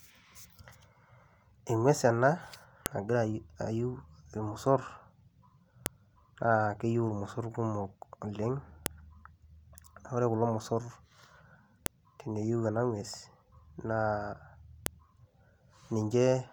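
Speech clip with a file header played as audio: sharp, loud clicks at 2.86, 5.86, 8.86 (after "emiisoor kumook oleng"), 11.86 (before "teneiyeu ana") and 14.86 s. The 3-second spacing shows joined pieces whose header bytes were left in and decoded as samples.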